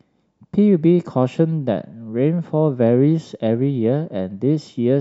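No technical faults are audible.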